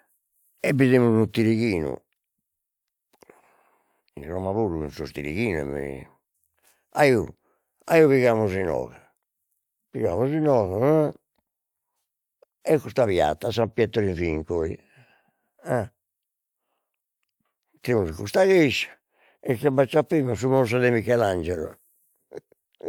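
No technical faults are audible.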